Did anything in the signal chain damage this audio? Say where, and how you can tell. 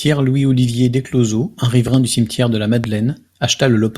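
Yes. There are loud pops. A quick double pop sits at 1.88–1.96 s, right before "du cimetière de la", and a single one at 2.84–2.86 s, just after that phrase. Each jumps to about 10 dB above the speech, which carries straight on underneath. That points to a voltage spike getting into the signal rather than anything cutting the audio, most likely in the analogue wiring, from a plug, switch or static discharge, with the following circuitry shaping it into a thump.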